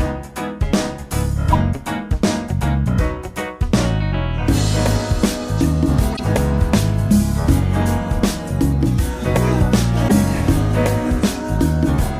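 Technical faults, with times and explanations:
1.52–1.55 s, 6.12–6.20 s, 10.08–10.16 s: corrupt frame decoded. Damaged compressed frames were decoded anyway, so misplaced spectral energy produces brief chirps and noise bursts peaking at about -5 to -10 dBFS.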